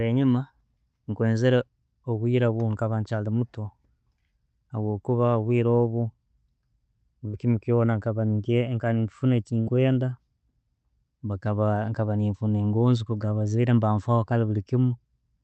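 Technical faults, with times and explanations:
7.27–7.36 s and 9.61–9.69 s: burst of packet loss. A short run of call packets arrived too late or not at all, so the receiver extended the last sound for about 50 to 60 ms, fading it into a brief buzz or hiss, then resumed with about 60 ms skipped.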